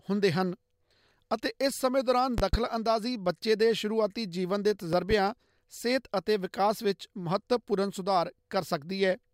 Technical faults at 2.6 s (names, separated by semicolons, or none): loud pop